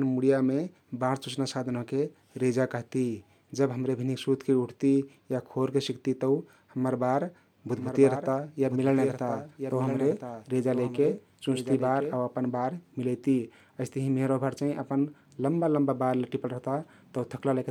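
From 7.77 to 12.17 s, the speech is likely being captured a second time through a slower path, which produces a doubled audio track. A full-band copy trails about a second behind and about 10 dB quieter, with no decay or room colour, and it starts and stops abruptly.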